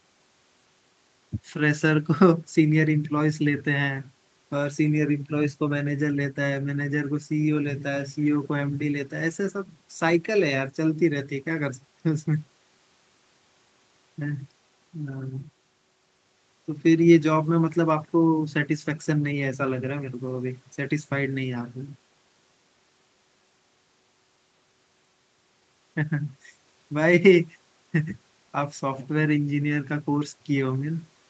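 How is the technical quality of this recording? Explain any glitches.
No glitches turn up anywhere in the speech. The sound stops at 8 kHz, the upper limit of the call path and its Opus codec.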